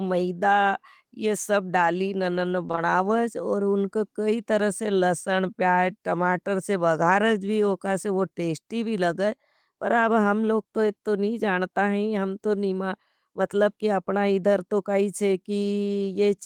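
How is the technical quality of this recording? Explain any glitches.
One glitch stands out in this speech: short concealed packet loss after "ये सब डाली ननन", three back-to-back losses at 2.67, 2.71 and 2.75 s, ending at 2.79 s before "और उनको कई तरह". Each time about 20 ms of audio arrived too late, and the receiver extended the preceding sound to fill it. The result is a brief smear or wobble rather than the hard silence of a true dropout.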